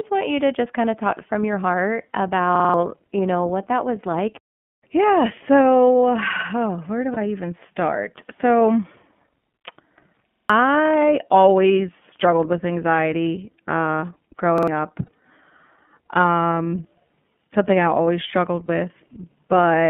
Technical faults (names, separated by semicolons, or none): iLBC codec; repeated buffer; lost iLBC frames